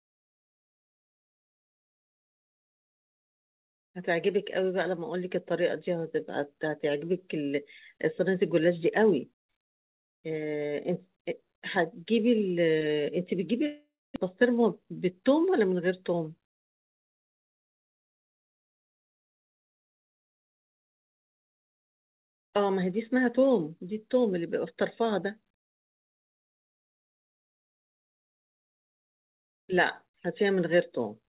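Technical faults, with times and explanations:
13.66–14.18 s, long network dropout: the speech stops being fresh audio here and the receiver carries the last sound forward as a fading buzz for about half a second, with roughly 260 ms of that stretch reduced to silence. Around 400 ms of the original speech never plays, so when sound resumes at 14.18 s it picks up further along. This pattern most likely reflects a run of packets that failed to arrive in time.
14.34–15.20 s, jitter buffer speed-up: straight after the gap the speech runs at about 108% of normal speed while keeping its pitch, which makes it sound slightly hurried. Once the late audio finally arrived, the buffer was holding more than its target, so the receiver trimmed short pitch-period slices repeatedly, removing around 70 ms in total to bring the delay back down. The call path's codec keeps nothing above 4 kHz, which can be heard across this stretch as well.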